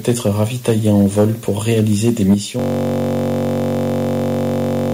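The clip is speech with three kinds of fault. From 0.07 to 1.25 s and again from 1.69 to 2.34 s, the loudest syllables sound harsh and crackly. Their peaks are flattened. The signal runs about 5 dB over full scale in the first stretch and about 3 dB in the second. Only a small share of samples, around one or two percent, are cut. This is likely microphone overload: the input gain was set high enough that the converter clipped the tops of the waveform. At 2.34 s, right after the second distorted stretch, the whole signal drops in level at once. The speech and the background both fall by about 6 dB in a single step. This is likely the microphone volume being stepped down, with call software reacting to the clipping by cutting the device's input gain. From 2.59 s to the end of the clip, the speech stops and a steady buzz takes over. It is a system hang loop. The machine or its driver froze while the sound hardware kept replaying the same buffer. 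One 21.33 ms slice repeats over a hundred times. That gives a tone at 46.9 Hz, which fits a 1024-sample buffer.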